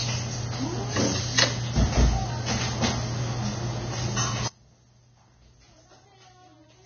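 From the start, the audio is band-limited and grainy. Nothing is heard above 6.5 kHz. The treble that remains is rough and hissy, tones sound coarse, and attacks are smeared. This is likely Vorbis compression at heavy damage. The encoder keeps a smooth spectral outline but quantises the fine detail so crudely that it turns into noise of similar energy. The damage points to a very low bitrate, around 19 kbps.

At 4.48 s the audio drops out abruptly and stays out to the end. It is a sudden break, not a fade or a pause. Only a faint leak of the sound remains, roughly 30 dB below its normal level. This is an audio dropout to a faint residue. The wanted signal was likely lost, but the path after the break stayed live and carried that weak remnant.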